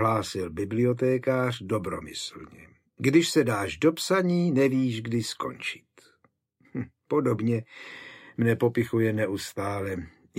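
Nothing here needs flagging: the audio runs along without a single glitch, dropout or odd artefact popping up anywhere in it.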